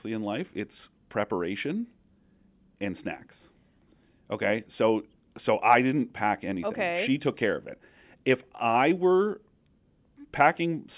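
Listening closely to the speech, nothing stood out as a technical fault at any point.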